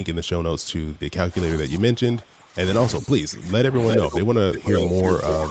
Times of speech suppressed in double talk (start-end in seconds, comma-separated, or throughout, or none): 1.29-2.58, 2.99-5.50